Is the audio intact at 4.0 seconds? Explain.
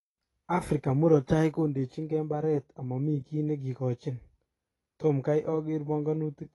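No. At 4.0 seconds the speech is dull and smeared, with a warbling, fizzy edge, and nothing sounds above 11.5 kHz. This runs through the whole clip. The likely cause is AAC compression at a low bitrate, around 32 kbps, which lowers the cut-off and coarsely quantises frequency bands.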